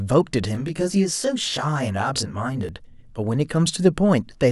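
From 0.55 s to 2.69 s the speech turns rough and slightly doubled. This is channel delay, heard as comb filtering. One channel runs late by around 20 ms, and the two are then folded to mono. Content shared by both channels cancels at evenly spaced frequencies, starting near 30 Hz. These fixed notches carve the spectrum into a comb. The result is a rough, slightly doubled sound that lasts for the whole span.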